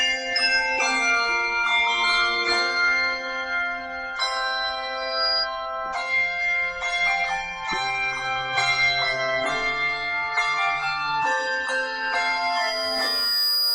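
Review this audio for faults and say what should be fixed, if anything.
Loudspeaker feedback squeal at 4.97–5.48 s and again from 11.78 s to the end: the microphone is hearing its own loudspeaker, and around 4.9 kHz the loop gain tops one, so that tone swells on its own, briefly to about the signal's level, then for over a second to overtake it. Prevent it by lowering gain, moving the microphone away from or behind the speaker, or notching 4.9 kHz.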